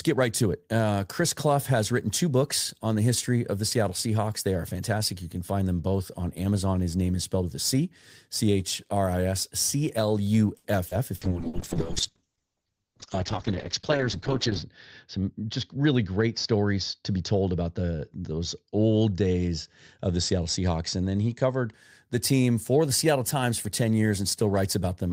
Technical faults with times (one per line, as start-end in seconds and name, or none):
10.57-11.57 repeated packet loss (robotic sound)
11.16-21.80 call bitrate drop
15.16-15.85 jitter buffer speed-up